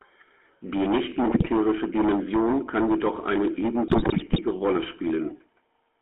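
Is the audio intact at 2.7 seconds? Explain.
No. At 2.7 seconds, as throughout, the speech has a buzzy, gravelly roughness and nothing above about 3.4 kHz or below 250 Hz, the mark of the GSM full-rate codec. It models the vocal tract and excites it with a thinned, regularly spaced pulse train, which fits a 13 kbps stream.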